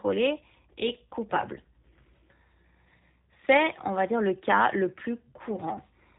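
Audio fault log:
throughout, G.729 codec: the speech has a plainly audible rough, synthetic edge because it's rebuilt from a vocal tract model, a pitch predictor and a few pulses per short frame, and nothing survives above 3.8 kHz, which fits an 8 kbit/s G.729A stream.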